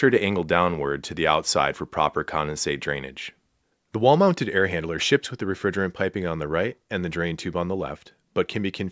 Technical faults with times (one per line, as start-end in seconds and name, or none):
none